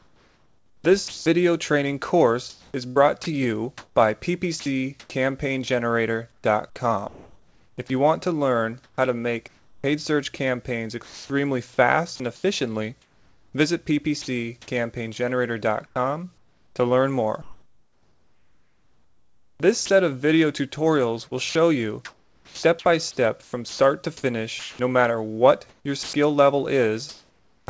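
The sender's voice detector likely switched transmission on and off repeatedly, causing sound chopped by the voice detector from 0.0 to 14.3 s, 15.9 to 19.9 s and 21.3 to 27.7 s. About 4.0 s, 2.7 s and 1.9 s of sound were replaced by comfort noise, so the audio cuts in and out.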